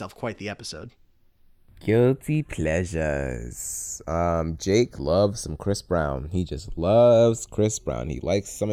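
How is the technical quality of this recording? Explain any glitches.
A slow flanging sweep runs through the speech for the whole clip: channels drifting apart, as two separately clocked devices, roughly 40 ppm off, let their offset creep toward about a third of a millisecond.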